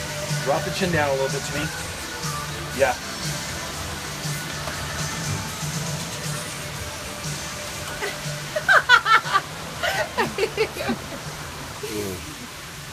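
From about 1.58 to 2.06 s there's a burst of processor overload crackle. The processor couldn't keep up with its small audio buffers for that half second or so, and each missed deadline simply got skipped, leaving a hard-edged hole. The spacing suggests buffers of roughly ten milliseconds, with something like seven misses over that stretch. Stacked together, those little dropouts come across as a gritty, tearing crackle over the sound, and it clears once the load passes.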